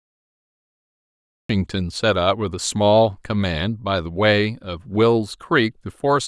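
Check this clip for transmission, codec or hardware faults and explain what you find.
One fault is present: a cut-off start in this speech clip.

Cut-off start, 0.0 to 1.49 s: the capture or stream engaged late, so the first 1.49 s are digital silence and the speech enters at 1.49 s already partway through a sound. Because the signal was joined mid-waveform rather than at a natural onset, there is no attack or fade-in; the speech appears at full level instantly, sounding truncated and abrupt.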